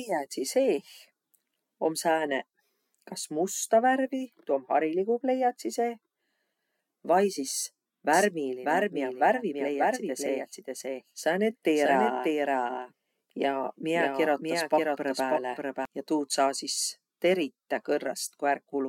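From 8.13 s to 15.85 s there's a doubled audio track: a second copy of the speech trails the first by about half a second, roughly 5 dB quieter. It's full-band and bone dry, with no decay or room colour like a real echo, and it cuts in and drops out abruptly. The likely cause is the signal being picked up again through a slower path, or an edit leaving two misaligned copies stacked.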